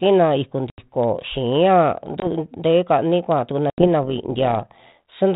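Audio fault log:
0.70–0.79 s, 2.20–2.28 s (just after "tee kani kuaa tukuna"), 3.70–3.86 s (just before "tee kani kuaa tukuna"): packet loss on an ADPCM call. Hard-edged silent gaps of 80 ms, 20 ms and 80 ms fit roughly four, one and four lost packets. Unlike a simple dropout, the speech resumes slightly distorted while the G.726 32 kbit/s decoder's predictor and step size re-align with the sender's.
4.03–5.14 s: overlap-add ripple. The level pumps by about 6 dB at a steady 100 Hz, giving a metallic buzz with extra tones around each note. The rate is fixed and tied to the frame rate, not to the speech, so it differs from natural tremolo or a modulation effect. The frame windows overlap without summing to constant gain.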